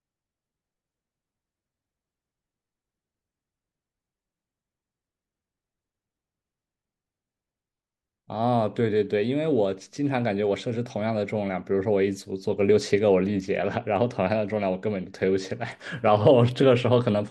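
Nothing in this recording trips a technical fault, so there's really nothing to walk through here.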